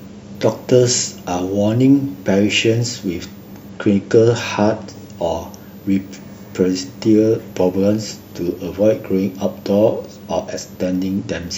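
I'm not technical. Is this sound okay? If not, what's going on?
No. A faint, very high switching supply whistle, around 15 kHz, runs under the speech throughout. Unlike low mains hum, its pitch wanders between roughly 13 and 16.5 kHz.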